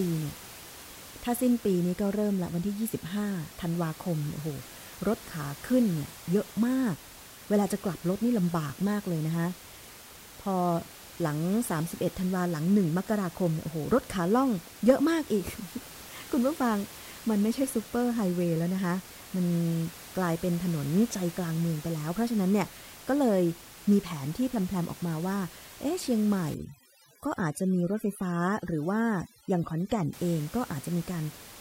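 From 26.54 to 30.13 s, overdone noise removal sets in: bands near the room noise, which sits about 19 dB below the speech, are pushed almost to nothing, leaving near silence with twinkling specks. Unlike a noise gate, which shuts everything at once, this strips individual frequency bands.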